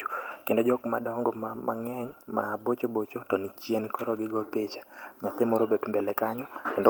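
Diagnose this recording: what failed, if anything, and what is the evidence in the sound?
Nothing failed, and the sound of this speech recording gives no evidence of a fault at any stage.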